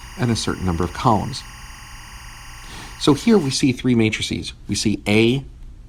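From 0.00 to 3.53 s, timecode bleed sits behind the sound: linear timecode leaking in from an adjacent track or cable. Its square wave flips between tones near 1 and 2 kHz, roughly 20 dB below the audio, producing a steady chirping warble whose rhythm fits 24-frame code.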